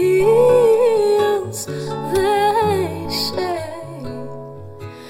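From 3.52 s to the end, channel delay (comb filtering) sets in. One channel lags the other by around 20 ms, and summing them cancels shared content at evenly spaced frequencies from the low tens of hertz upward. The sound turns rough and slightly doubled, and a spectrogram shows fixed, regularly spaced dark horizontal notch bands.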